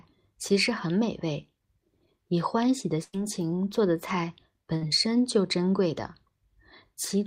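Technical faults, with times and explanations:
3.03 to 3.15 s, burst of packet loss: About 100 ms of audio never arrived in time. The receiver extended the last sound for about 94 ms and faded it down. The sound then resumes further along. The stretch in between is simply gone.
4.77 to 4.83 s, short concealed packet loss: About 40 ms failed to reach the decoder. The receiver filled the hole by continuing the previous sound for about 43 ms. It then blended back into the real audio. The result is a brief smear.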